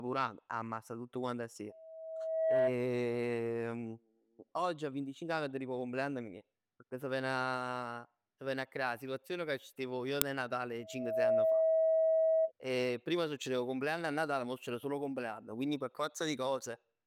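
At 1.69 s, just after "amma sta tutt quant", the microphone picks up its own loudspeaker and the loop gain exceeds one at 644 Hz, producing a loudspeaker feedback squeal. The tone swells over about a second to roughly 10 dB above the speech and cuts off at 2.74 s.

At 10.22 s, an uninitialised buffer plays stale memory as audio, giving a loud digital click about 1.3 ms long, which fits a 64-sample block.

From 10.80 s to 12.52 s, the same 644 Hz feedback squeal returns, building much faster, in under half a second, to a similar level.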